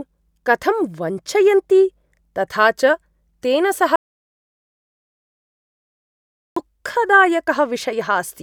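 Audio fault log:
3.96–6.56 s, audio dropout to silence: the speech cuts off abruptly and about 2.6 s of silence follows, with no room tone or hiss underneath, before the speech resumes just as suddenly mid-flow. Everything spoken in that gap is gone. The cause is likely a loss of the input signal, such as a disconnected device, a broken link or a brief mute, while the recording carried on writing silence.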